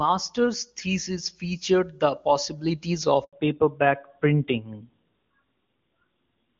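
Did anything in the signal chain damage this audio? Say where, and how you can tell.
Yes. A handover gap occurred at the network stage. Just after "thesis featured the possibilities", the sound dies away and stays silent from 3.25 to 3.33 s, about 80 ms, while the call switched networks and no speech frames arrived. The waveform goes flat there, and a spectrogram shows an empty vertical strip.

From 3.33 s to the end there is a fallback to narrowband at the codec stage. Everything above 4 kHz disappears, and the voice turns duller and rougher. On a spectrogram, the wideband content before the gap, which fits HD Voice at its top rate, gives way to a sharp horizontal ceiling at 4 kHz.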